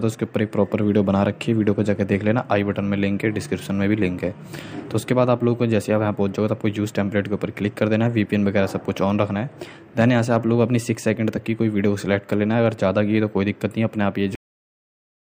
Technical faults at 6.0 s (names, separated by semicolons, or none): none